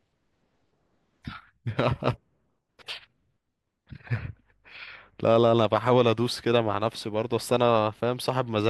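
No technical faults are audible.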